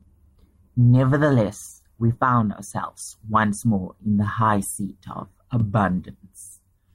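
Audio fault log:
No faults are logged for this clip.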